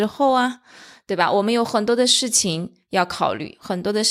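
No technical faults are audible anywhere in the speech recording.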